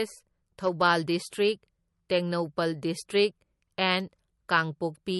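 Speech, with plainly audible MP3 compression damage running the whole way through: nothing comes through above 11.6 kHz, and the sound has that watery, swirly texture where weak detail flickers in and out. That's likely a starved encoder, which fits a low bitrate somewhere around 40 kbps.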